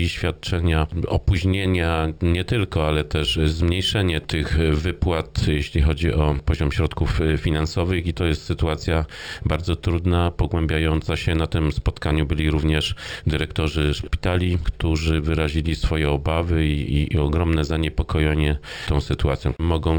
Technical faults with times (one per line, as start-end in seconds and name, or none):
0.00-19.99 imaging from linear upsampling